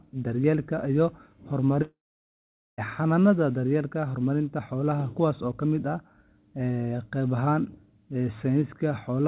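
From 1.82 s to 2.81 s the speech stops. The last sound carries on as a fading buzz or hiss, then gives way to silence lasting about 0.82 s. Almost a full second of audio, about 0.96 s, is simply gone. When the speech resumes, it picks up further on, with that stretch missing. This is likely a long network dropout. The receiver had nothing to play and could only stretch out the last sound before going quiet. Throughout, the G.711 call path leaves nothing above 4 kHz.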